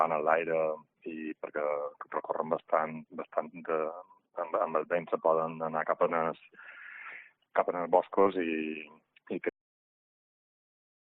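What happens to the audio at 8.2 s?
A short concealed packet loss hits at 8.23 to 8.27 s. About 20 ms never arrived and was filled by extending the preceding sound, leaving a brief smear.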